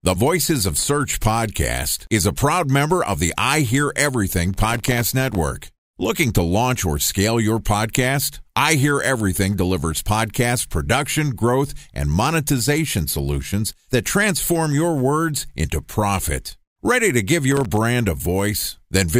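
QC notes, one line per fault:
4.54–5.41 s, processor overload crackle: the processor misses dozens of sub-millisecond buffer deadlines again and again, each leaving a hard-edged silent gap, heard as gritty crackling tearing through the speech.
17.52–17.77 s, processor overload crackle: just after "to give", a shorter run of missed tiny buffers drops brief silent slivers, giving a quick burst of crackle.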